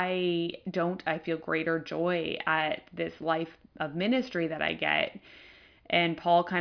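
No technical fault can be heard anywhere in the speech recording.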